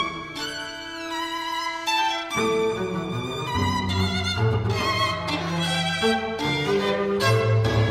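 No technical faults can be heard anywhere in the audio, and the signal stays continuous and steady throughout.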